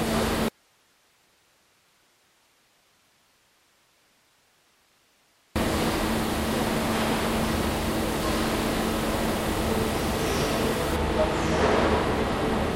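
From 0.48 s to 5.56 s the audio drops out, leaving only hiss roughly 40 dB below the signal; the abrupt cut, unlike a fade, points to a likely dropout to a faint residue. From 10.96 s to the end, wrongly applied de-emphasis dulls the sound, sloping smoothly to about 8 dB down at 10 kHz against 1 kHz, rather than cutting off sharply.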